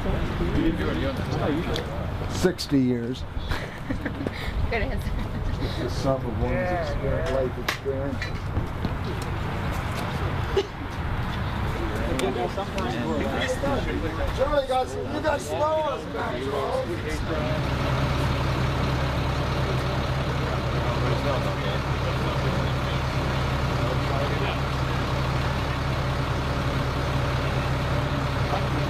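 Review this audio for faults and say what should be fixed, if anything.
No faults turn up in this audio, so nothing needs to be fixed.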